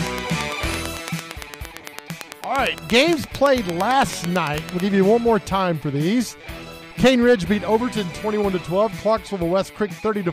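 A regular train of clicks runs from 0.07 to 4.81 s, about nine per second, some forty sharp ticks well above the sound, likely from electrical interference.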